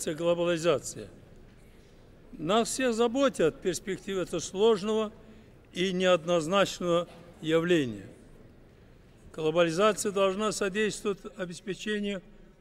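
From 11.13 s to the end at 12.60 s, channel delay causes comb filtering: one channel lags the other by roughly 5 ms, and summing them cancels evenly spaced frequencies from around 100 Hz upward. The sound turns hollow and phasey. A spectrogram shows fixed, regularly spaced dark notch bands.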